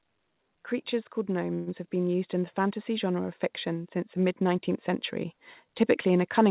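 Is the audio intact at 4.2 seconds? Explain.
Yes, the speech at 4.2 s is intact, with no dropout, glitch or distortion there, only the narrowband sound of the call path, which carries nothing above 4 kHz.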